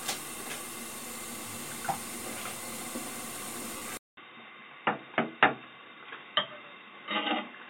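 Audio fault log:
3.77 to 3.82 s, lost LE Audio frames: about 45 ms of sound goes missing, which fits six lost frames. The decoder fills the gap by replaying the last spectrum with randomised phase, so the sound smears into a short noisy blur before normal audio returns.
3.97 s to the end, input switched to a poorer device: after a 200 ms silence the sound drops by about 5 dB and loses everything above 3.8 kHz, turning dull and boxy. A new noise floor sits roughly 45 dB down. This is likely a change to a narrower-band microphone.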